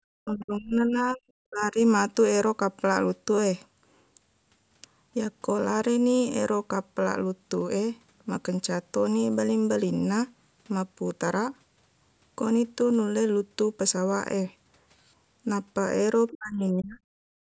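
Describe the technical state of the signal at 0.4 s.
At 0.4 s the speech sits inside a stretch of speech suppressed in double talk, running from 0.23 to 1.23 s. The level falls sharply, by about 30 dB at its deepest, so the talker sounds dipped for roughly a second. The likely cause is an echo canceller that, with both ends talking at once, could not tell the near talker from loudspeaker echo and attenuated everything it heard.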